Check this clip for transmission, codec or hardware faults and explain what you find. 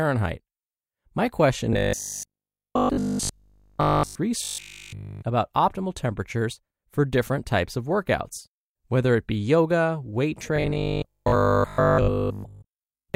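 Robotic sound from repeated short buffers occurs three times: 1.73–4.17 s, 4.42–5.22 s (just before "about optimal temperatures for"), and 10.56 s to the end, after "it be yoga weight". The likely cause is audio arriving too seldom, so a segment of about 20 ms is replayed in place of the missing audio. That imposes a rigid 50 Hz metallic buzz, which replaces the speech entirely in the first two stretches and most of it in the last. Unlike mains hum, this buzz tracks the speech roughly and stops outside these spans.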